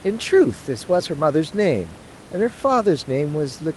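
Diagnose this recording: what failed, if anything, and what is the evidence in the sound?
Nothing in the recording points to a failure at any stage: the speech arrives through a call codec path whose band tops out around 12 kHz, and the steady room noise sits about 24 dB below the speech, a property of the recording space rather than of the system.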